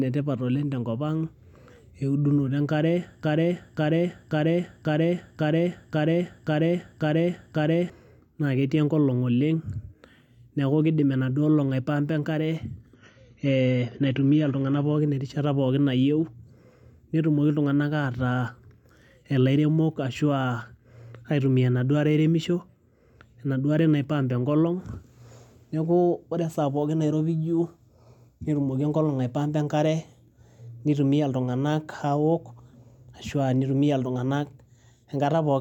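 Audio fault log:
3.23–7.90 s, broken-record loop: the same 0.54 s fragment repeats exactly, back to back, nine times, and the speech that belonged in that span never plays. The player, encoder or stream likely stalled and kept resending the last piece it held.
12.95–14.95 s, adaptive stream at a lower bitrate: the speech suddenly turns dull, with nothing above 7 kHz and stronger codec artefacts, then recovers without any gap. This points to a slowed connection forcing a drop from roughly 96 to 24 kbit/s AAC.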